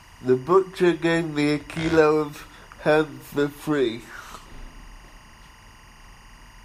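Timecode bleed runs under the speech throughout, faint at roughly 30 dB down, a chirping warble from leaked timecode that fits 23.976 fps code, showing as steady lines near 1 and 2 kHz.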